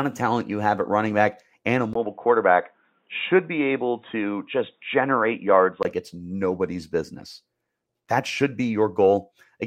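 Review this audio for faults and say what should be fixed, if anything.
Input switched to a poorer device, 1.93 to 5.85 s: the speech suddenly loses everything above 3.8 kHz and turns dull and boxy, with a short gap of about 20 ms at the changeover. A faint new noise floor, roughly 50 dB below the speech, comes in with it, though loudness barely shifts. At 5.85 s the full bandwidth returns. The likely cause is the system moving capture to a narrower-band microphone or headset call profile, then back. To prevent it, lock the recording input to one fixed device and disable automatic device switching for the session.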